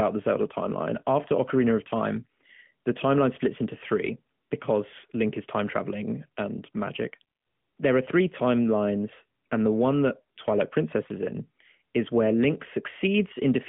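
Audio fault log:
Throughout: AMR narrowband mobile codec. The speech is confined to a telephone band of roughly 150 Hz to 3.4 kHz, with nothing above 3.6 kHz, and has a plainly audible buzzy, synthetic edge from pulse-driven vocal-tract modelling, consistent with a mid-rate mode near 10 kbps.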